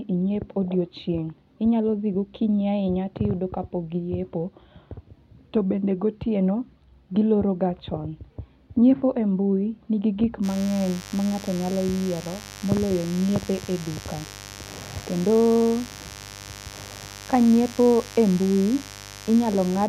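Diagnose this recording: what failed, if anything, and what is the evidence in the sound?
Mains buzz enters in the analogue wiring. From 10.4 s to the end, a steady, raspy buzz sits under the speech, roughly 20 dB below it. Its 50 Hz harmonics reach into the kilohertz range. Sharp switching spikes, twice per cycle, are coupling in.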